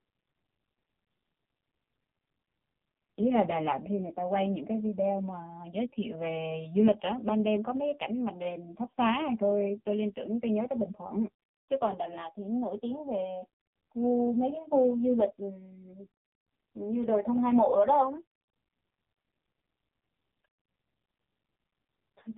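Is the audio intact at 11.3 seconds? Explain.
No, at 11.3 s the speech is running through the AMR narrowband mobile codec, as it does for the whole clip. It models the vocal tract with a few pulses per frame and passes nothing above 3.8 kHz, so it sounds muffled, buzzy and heavily synthetic, which fits a very low rate of about 5 kbps.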